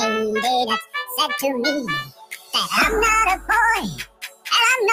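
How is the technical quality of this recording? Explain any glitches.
The technical quality is compromised: a speech-oriented noise suppressor is processing this material throughout, with three deeper cuts.

Across the whole clip, the noise suppressor applied to music or sounds treats sustained tones and ambience as noise. Its gain swings by around 15 dB, so onsets pass while held parts and tails sink. The sound pumps and thins.

Sound cut by the noise suppressor occurs from 0.82 to 1.18 s, 2.04 to 2.54 s and 3.98 to 4.49 s. The processor pulls these stretches down hardest, by about 17, 19 and 20 dB. Each cut lasts roughly a third to half a second, and the sound sinks in level or its decay is cut short.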